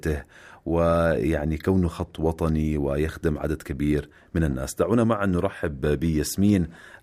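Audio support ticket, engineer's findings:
No fault found in the speech recording. No component implicated, no action required on the audio path.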